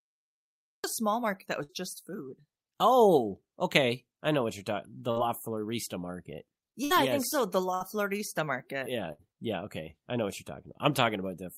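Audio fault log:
0.00 to 0.84 s, cut-off start: The clip opens on digital silence. At 0.84 s the speech breaks in mid-sound, just before "a small market that". There is no natural attack and no fade-in. The recording or stream began late, so the first part of the sound was never captured. What we hear begins partway through it, which is why the entry feels abrupt.
1.63 to 1.72 s, 5.11 to 5.19 s, 6.84 to 6.93 s, 7.74 to 7.83 s and 9.12 to 9.22 s, burst of packet loss: Five short gaps, each filled for 52 to 66 ms. The first falls between "a small market that" and "just food". The second comes after "know what you're talking". In each gap the receiver stretches the last sound and lets it fade, so a voiced sound turns into a held buzz and other sounds into a fading hiss. The speech then resumes with 60 ms missing.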